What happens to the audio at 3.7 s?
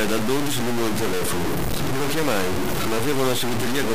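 At 3.7 s the speech is coarse and gritty, with a harsh grain that rises and falls with the sound, and the quietest parts sputter or cut out between steps. The distortion runs through the whole clip, not just this moment. It is likely low bit depth without dither: truncation to about 3 bits leaves error that tracks the signal, so the distortion sits at roughly the level of the speech itself.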